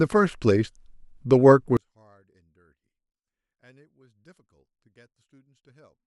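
From 1.77 s to the end, the speech collapses to a faint residue about 36 dB down when heard in mono. The likely cause is one channel inverted: reversed polarity on one side cancels the centred voice when both channels are summed.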